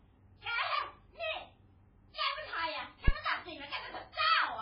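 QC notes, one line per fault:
Throughout, MP3 compression: heavy codec damage, with watery, swirling speech and nothing above 5.2 kHz. This is likely from an encoder starved of bits, consistent with roughly 16 kbps. On a spectrogram, a hard ceiling at 5.2 kHz and weak components flickering on and off between frames.
2.12–2.16 s, pre-echo: a short hiss about 48 ms long comes just before an attack, which sounds soft and smeared. Quantisation noise sized for the loud onset spreads back across the block. On a spectrogram, a broadband smear ahead of the transient.
3.08–3.14 s, phantom power thump: a deep thump that dies away within about 12 ms, from a supply step passing through coupling capacitors on the live input. On the waveform, a sudden low-frequency offset with a fast exponential return. On a spectrogram, a burst concentrated in the lowest bins.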